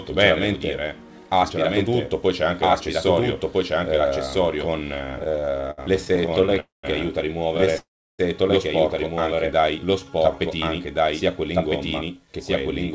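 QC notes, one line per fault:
throughout, doubled audio track: a second full-band copy sits about 1.5 s behind at roughly the same level, dry with no room decay, so it reads as a clean echo rather than reverb; likely two capture paths or an edit holding two out-of-step copies.
5.06–6.58 s and 7.57–7.76 s, repeated stalls (stutter): the first run has 25 brief gaps, longest 67 ms, filling 360 ms. The second has 4 gaps, longest 12 ms, filling 45 ms. Each gap is bridged by continuing the last sound, so the audio drags and stutters without losing anything, unlike a single long hold.
6.60–6.85 s and 7.78–8.21 s, call audio freeze: the sound is held and then fades, leaving about 160 ms and then about 340 ms of silence before resuming where it stopped. These add 235 ms and 409 ms of delay, likely from packets held up until the jitter buffer emptied. One sustained hold to silence separates these from stutter.
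9.35–10.37 s, jitter buffer slow-down: the audio runs at about 88% speed with pitch unchanged, adding 136 ms by repeating single pitch periods and bits of pauses to rebuild the buffer. It sounds drawn out, with no hold or silence as in a freeze.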